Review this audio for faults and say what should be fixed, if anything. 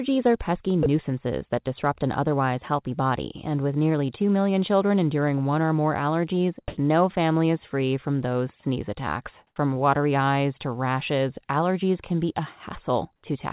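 At 0.83 to 0.86 s, about 30 ms of speech drops out and steady hiss sits in its place. That's likely sound dropped by the voice detector: it took part of the speech for background, stopped sending, and the receiver filled the gap with comfort noise. Lowering the detector's sensitivity threshold or adding hangover time would keep those quiet stretches on air.

Comfort noise in place of the background shows up twice, each time for about 90 ms: 6.68 to 6.77 s and 9.47 to 9.56 s. The real background gives way to flat, featureless noise. In the first gap it's about 44 dB louder than the background around it, and in the second about 4 dB quieter. Discontinuous transmission is the likely cause, with the receiver's synthetic fill mismatching the real background level. Disabling DTX, or sending more frequent background updates, would avoid it.

Nothing above 4 kHz reaches the listener, which fits a G.711 mu-law call path at 64 kbps.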